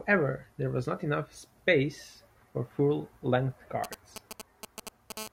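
From 3.84 to 5.12 s, GSM signalling bursts break in: a galloping dit-dit-dit of short buzzes pulsing at 217 Hz, roughly ten decibels below the speech. A nearby 2G phone sending short radio bursts is being rectified by the audio circuit. The grouped, intermittent rhythm separates it from a continuous phone buzz.

At 5.17 s the pattern turns into a steady GSM phone buzz lasting to 5.28 s, a hard, raspy 217 Hz tone rich in harmonics at about 10 dB below the speech. Now the phone transmits its bursts without gaps, as during a call, so the buzz holds unbroken instead of galloping.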